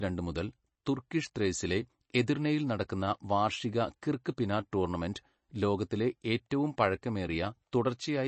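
A speech clip with plainly audible MP3 compression damage from start to finish. Nothing is present above 8.3 kHz, so sibilants sound dull and clipped, and the remaining upper band has a watery, swirling quality with chirpy s sounds and smeared consonant onsets, likely from an encoder starved of bits, which fits a bitrate around 32 kbps. On a spectrogram the energy stops at a flat ceiling near 8.3 kHz, with patchy, flickering blocks just beneath it.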